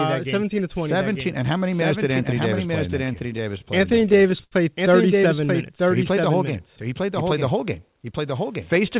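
Speech clip with two problems worth flagging. First, there's a doubled audio track running the whole way: a second full-band copy sits roughly a second behind the original, about 5 dB quieter, with no decay or room colour on it, likely from the signal being captured again through a slower path. Second, from 3.12 to 4.54 s, right after "play in that", you get repeated stalls (stutter). The jitter buffer kept running dry, so the receiver stretched the last bit of sound to cover each wait, about 214 ms in total, with the longest single hold at 79 ms. Nothing actually drops out, but that stretch drags and hiccups. The call path itself tops out at 4 kHz, which fits a narrowband codec along the lines of G.711.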